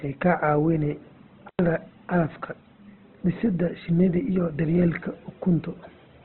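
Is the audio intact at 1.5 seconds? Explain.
No. An intermittent contact breaks the speech from 1.48 to 1.59 s. A loose connection opens for about 97 ms. The sound drops out with crackle at each edge, and faint hiss remains while the line is open.

The speech there is also muffled, with nothing above 4.2 kHz. Tones turn rough and grainy. This is likely Opus compression at 12 kbps in its CELT music mode, squeezed to narrowband, with noise filling the bands it cannot afford.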